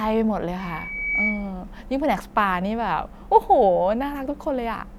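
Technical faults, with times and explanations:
0.59–1.54 s, loudspeaker feedback squeal: the microphone is picking up the loudspeaker it feeds, and near 2.3 kHz the gain around that loop rises above one, so the tone reinforces itself on each pass. In the speech this shows up as a thin whistle that swells over about half a second until it is roughly as loud as the talker, then holds as a squeal before dropping out at 1.54 s.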